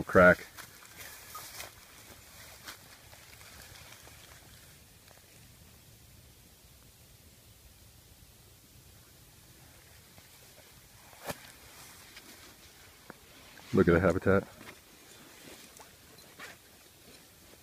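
No technical faults can be heard anywhere in the signal.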